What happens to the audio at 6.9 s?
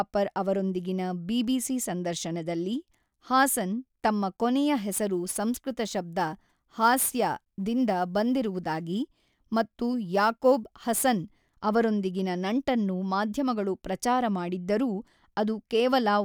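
At 6.9 s the speech is affected by sample clock jitter, running from 4.76 to 11.44 s and beginning just before "ಅವರೊಂದಿಗಿನ ನಂಟನ್ನು ಮಾಧ್ಯಮಗಳು ಪ್ರಚಾರ". A clock wandering by a few microseconds mistimes each sample, producing a hiss-like roughness roughly 25 dB below the signal that swells on loud, bright sounds and disappears in pauses.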